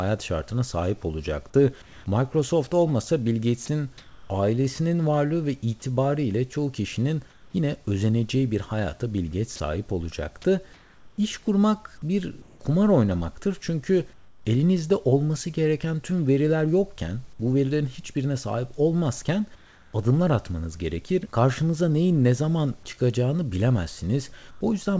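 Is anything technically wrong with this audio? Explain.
Yes. The speech has three kinds of fault, all tied to a voice detector cutting transmission.

Comfort noise in place of the background appears at 1.82 to 2.06 s after "şartına sahip olacaktı", at 3.66 to 4.30 s, at 7.30 to 7.54 s, at 19.55 to 19.93 s between "verilerin hiçbirine sahip olmazken" and "adımlar atmanız gerekir", and at 24.51 to 24.61 s. The likely cause is discontinuous transmission: the sender stops during pauses, and the receiver fills them with synthetic noise. The real room background turns flat and featureless, shifting by about 1 to 2 dB.

Sound dropped by the voice detector occurs at 3.66 s. About 20 ms of speech was likely mistaken for background and not sent. A brief piece of sound vanishes into steady noise, just as a longer comfort-noise stretch begins.

Sound chopped by the voice detector runs from 9.56 to 14.45 s, ending just before "elinizde olması gereken tüm". 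The detector likely toggled on and off repeatedly, swapping almost a second in total of speech for fill. The speech sounds choppy.

The audio has nothing above 8 kHz, which fits a wideband call codec such as G.722.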